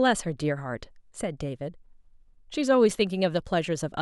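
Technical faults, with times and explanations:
2.90 s, repeated buffer: A piece of the speech about 5 ms long plays twice in a row, which fits a 256-sample buffer. New audio arrived late, so the device replayed the last one. The hard join makes a single click. No audio seems lost.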